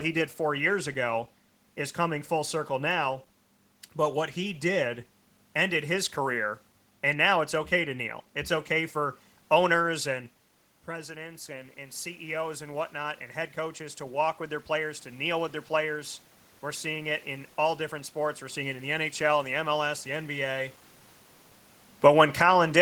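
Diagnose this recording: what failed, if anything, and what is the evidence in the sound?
The failure is in call processing, where an automatic gain rise starts at 10.88 s, just after "okay for owners and". Around 10 s the sound at the microphone drops by about 10 dB, as the talker moves away, and the AGC responds by raising its gain by about 8 dB over eight seconds, to 18.96 s. The room noise swells along with the voice. On a waveform the envelope climbs slowly. On a spectrogram the noise floor brightens across all frequencies together.

An automatic gain fall, also in call processing, runs from 21.91 to 22.67 s. Near 21.5 s the talker moves, and the AGC pulls its gain down by about 4 dB over roughly three-quarters of a second. The sound arrives loud and then sinks, with the background sinking alongside it. On the waveform the peaks taper downward. On a spectrogram the voice and the noise floor dim together, because the cut is broadband.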